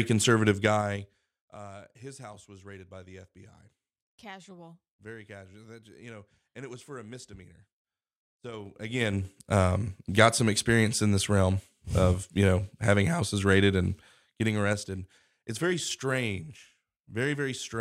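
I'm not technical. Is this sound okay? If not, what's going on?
No. There is zipper noise in this speech. The volume is being changed in small jumps instead of a smooth slide, and each jump adds a tiny click. Together the clicks sound like a zip. It happens three times. From 0.44 to 1.6 seconds the sound drops a lot, just before "his house was raided". From 8.48 to 9.4 seconds it rises a lot, just before "um got some experience". From 13.8 to 15.08 seconds it drops a little, more slowly, after "know having houses raided".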